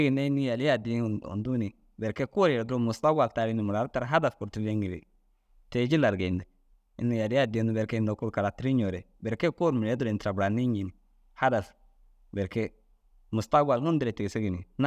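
No technical faults can be heard anywhere in it.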